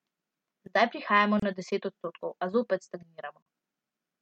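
A speech clip with two gaps at joins of encoded pieces: a gap of about 29 ms from 1.40 to 1.42 s, just before "na deset odstotkov a", and one of about 38 ms from 3.42 to 3.46 s, right after "deset odstotkov a zopet". They fall 2.0 s apart, matching separately encoded pieces joined without trimming each run's start delay and final-frame padding. Unlike a dropout, speech resumes exactly where it stopped, with nothing missing.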